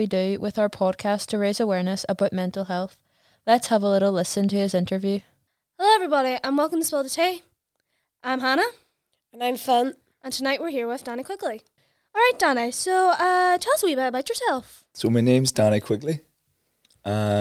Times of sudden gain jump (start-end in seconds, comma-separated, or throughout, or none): none